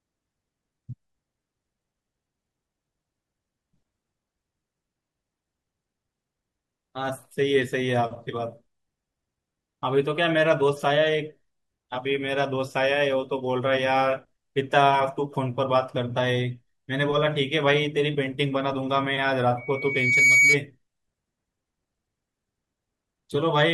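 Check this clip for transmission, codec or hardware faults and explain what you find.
One fault is present. Loudspeaker feedback squeal, 19.57 to 20.62 s: microphone and loudspeaker form a loop, and a 2.2 kHz tone swells within a second to about 10 dB above the speech.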